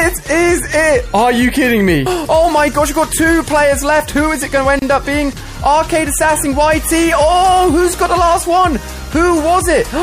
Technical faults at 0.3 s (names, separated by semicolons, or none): MP3 compression